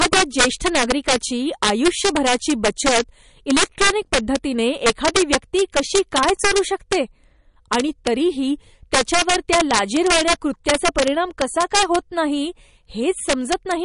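A gain stage drives the speech about 7 dB past full scale, and integer overflow wraps the loudest peaks, around one or two percent of samples, to the opposite sign, producing violent cracks throughout. Heavy MP3 compression is likely, fitting a low bitrate near 40 kbps: the treble stops at 10.6 kHz, and the speech sounds plainly watery and swirly, with smeared attacks.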